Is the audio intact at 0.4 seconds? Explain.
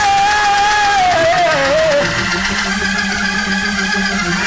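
Yes, the audio is intact at 0.4 seconds, with no fault audible at that moment.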